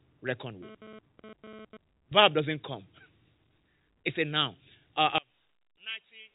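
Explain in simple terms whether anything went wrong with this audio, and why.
From 0.63 to 1.77 s, a GSM phone buzz cuts in: a harsh, rasping tone near 217 Hz that comes and goes as a nearby phone exchanges data. From 5.18 s to the end, the speech suddenly drops sharply in level, most likely because one channel is inverted and cancels the other when played in mono.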